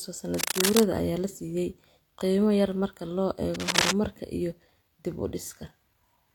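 A worn cable or connector likely shifted, its contact resistance jumping, so cable scratch noise about as loud as the speech rasps through 0.34–0.85 s, before "ayaa la siiyay qiimo", and again 3.54–3.94 s, after "qiimo yar marka loo".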